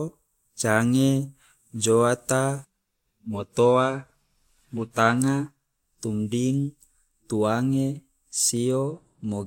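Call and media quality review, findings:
No audible faults found in the speech.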